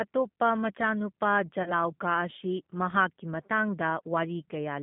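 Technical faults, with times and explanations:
throughout: G.729 codec. The audio is confined to a telephone band of roughly 150 Hz to 3.5 kHz, and the codec damage is plainly audible: a rough, slightly synthetic texture typical of a low-rate model-based coder, consistent with 8 kbit/s G.729A. Rather than storing the waveform, the codec rebuilds each 10 ms frame from a vocal tract filter, a pitch predictor and a few sparse pulses, so fine detail is replaced by an approximation of the speech.
1.63 to 1.72 s: VoIP packet loss concealed by the speech codec. About 30 ms of audio is missing, which fits a single lost packet. The decoder fills the gap by extending its last pitch and filter settings at falling gain, so the speech smears into a brief buzzy tone or coloured noise that fades instead of cutting out. Because each frame depends on the previous one, the decoder's state takes time to recover once packets resume, and the distortion lasts until about 1.72 s, well beyond the lost 30 ms.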